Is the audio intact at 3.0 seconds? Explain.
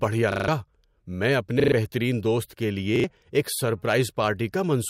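No. A repeated buffer fault runs from 2.96 to 3.04 s, just after "بہترین دوست کے". New audio failed to arrive in time, so the device replayed the last block instead. The same short slice of speech sounds three times in a row. The repeated slice is about 40 ms long, which fits a 40 ms buffer. Each repeat meets the next at a hard join. The result is a brief stutter, and roughly 70 ms of the real speech is lost.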